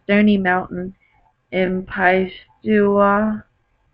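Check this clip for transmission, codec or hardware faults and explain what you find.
One fault is present: a time-stretched section. From 1.0 s to the end, the speech abruptly slows to about 0.61 times its pace while the pitch holds, so it drags. This is likely software stretching the audio, repeating short pieces to lengthen it.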